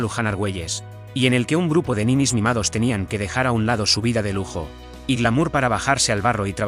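Nothing goes wrong anywhere in this audio, so there's no fault to point to at any moment.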